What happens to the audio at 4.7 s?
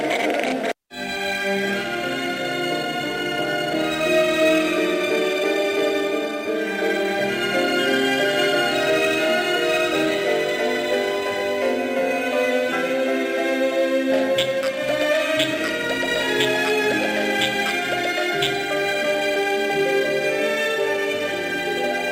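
Nothing goes wrong at 4.7 s; the audio plays through that moment intact, with no dropout, glitch or other fault.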